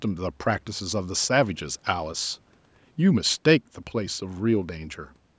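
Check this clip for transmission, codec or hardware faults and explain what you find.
Nothing faulty can be heard in this speech recording.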